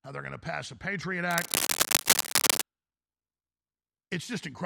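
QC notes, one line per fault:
1.31–2.63 s, cable scratch noise: likely a worn cable, connector or control being moved so that its contact resistance jumps around rapidly, letting a dense, irregular stream of noise bursts into the signal. For about 1.3 seconds a scratching and rustling sits over the speech, louder than the speech itself.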